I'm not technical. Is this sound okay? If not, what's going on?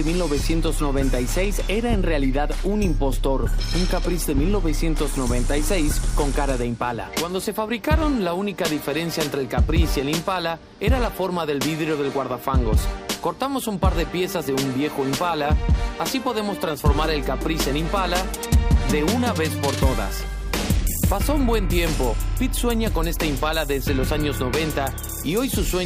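Yes, it sounds fine: nothing in it skips, crackles, drops out or cuts off, so there's nothing here you need to worry about.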